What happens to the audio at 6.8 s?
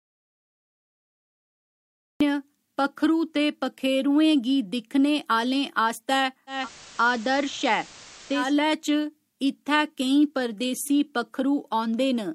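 At 6.8 s the speech is running on a hissier signal: steady background hiss sits roughly twenty decibels under it, though the loudness holds steady. This is digital radio blending to analogue. The receiver lost its digital stream and cross-faded over about 225 ms to the station's FM broadcast, staying there from 6.47 s until it blended back at 8.54 s.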